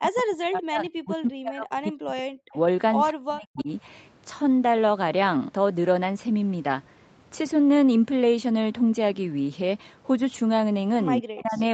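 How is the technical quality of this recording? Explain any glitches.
The recording has two kinds of glitch: the speech is repeatedly pushed down during double talk, and one brief echo leak gets through. The audio came over a call path, with Opus coding and nothing above 8 kHz.

Speech suppressed in double talk occurs from 0.0 to 2.57 s, from 3.11 to 3.69 s, and from 11.21 to 11.6 s. The likely cause is that both ends spoke at once and the echo canceller, unable to tell this talker from loudspeaker echo, attenuated everything. The voice sinks by as much as roughly 40 dB, over about two seconds at the start, about half a second in the second spot and about 0.4 s in the last, fading or breaking into fragments.

An echo leak appears at 3.56 to 3.63 s, inside the second suppressed stretch. It is likely that one side was on a loudspeaker and its echo canceller left part of the pickup unremoved, which was sent back. 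A faint copy of the voice arrives 209 ms late, about 20 dB below the speech, audible as a short scrap.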